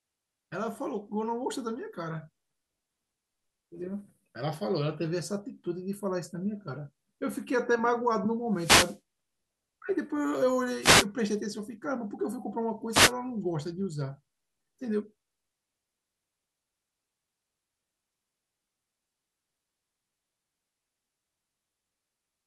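Wireless microphone noise hits occur at 8.54–8.99 s, 10.80–11.06 s and 12.91–13.13 s: the analogue FM radio link fades as reflected signals cancel, so receiver noise surges into brief swishes of static.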